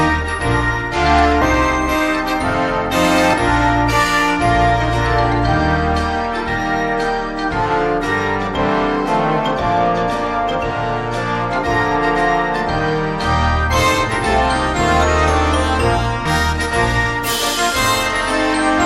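At 1.41 s, 3.33 s and from 16.25 to 16.30 s, compressed frames are skipped. The audio jumps ahead about 70, 70 and 100 ms, consistent with several 20 ms frames. The audio simply jumps at each join, with no silent gap.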